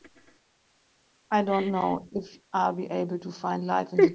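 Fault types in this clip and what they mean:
Echo leak: From 1.74 to 1.95 s a faint delayed copy of the speech can be heard. It trails the original by 227 ms and sits roughly 30 dB below it. This is likely an echo leak. The far side's loudspeaker played the call, its microphone caught that sound, and its echo canceller failed to remove all of it. The leftover was sent back down the line as a short, quiet repeat.
Speech suppressed in double talk: Between 2.1 and 2.23 s the speech dips for about a tenth of a second. At its deepest the level falls by around 5 dB. Both sides were talking at this point. The echo canceller likely could not tell the local talker apart from the loudspeaker echo. It turned everything down to be safe, and this brief pull-down is the speech suppressed in double talk.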